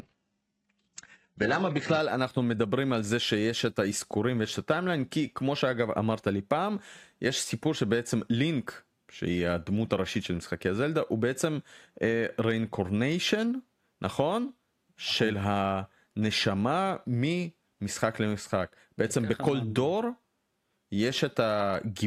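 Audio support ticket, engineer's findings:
Adaptive stream starting at a low bitrate, 0.0–2.0 s. Treble absent above 8 kHz, stronger codec artefacts; fits a very low-bitrate HE-AAC start. Player upgrades to a higher-bitrate rendition at 2.0 s once bandwidth is measured. Abrupt quality jump, no gap.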